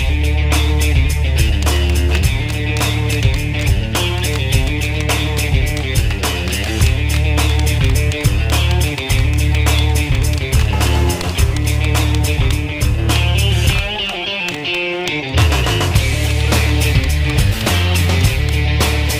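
No technical faults can be heard anywhere in the recording.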